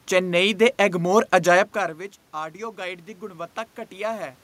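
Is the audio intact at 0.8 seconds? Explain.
Yes, the audio is intact at 0.8 seconds: the speech carries on cleanly there, with only the background noise of the room where it was recorded.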